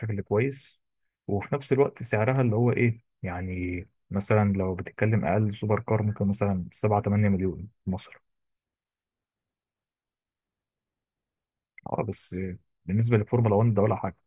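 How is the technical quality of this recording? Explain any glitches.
The speech recording has no audible technical faults at any point.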